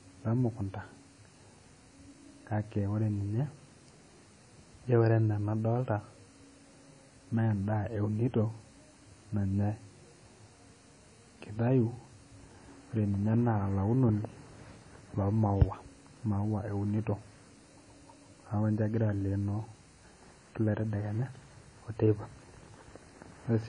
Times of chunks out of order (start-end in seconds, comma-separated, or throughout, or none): none